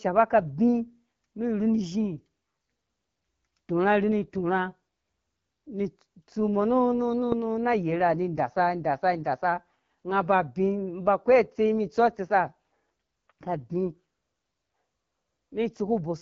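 Speech runs throughout through the AMR wideband (HD Voice) codec, rough and raspy in a way that fits its low 8.85 kbit/s mode; a spectrogram shows a hard ceiling near 7.5 kHz over a smeared band of noise-like filler above 6.4 kHz.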